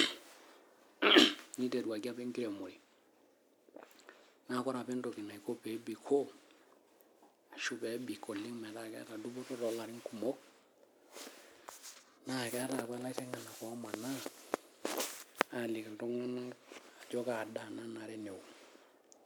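Speech recording, with nothing technically wrong to point to.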